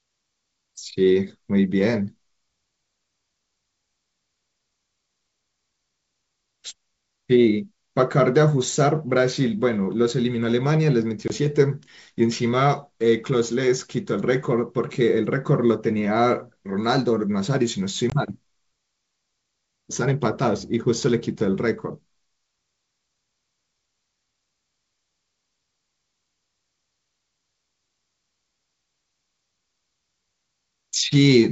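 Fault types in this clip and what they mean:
Packet loss on an ADPCM call: about one packet each time, leaving 20 ms silent gaps at 11.28 and 18.10 s. Speech resumes while the decoder's predictor briefly re-syncs.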